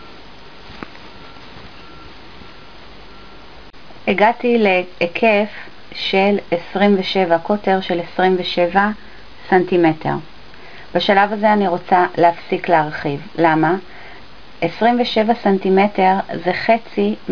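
No audible faults turn up anywhere in the clip.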